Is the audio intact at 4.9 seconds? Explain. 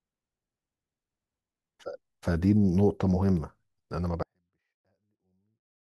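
No. At 4.9 seconds the speech sits inside a 24-bit alignment error running from 4.23 s to 5.81 s. Samples held in the low 24 bits of each 32-bit word are read as full 32-bit values. The level drops about 48 dB. The sound stays clean but is barely audible.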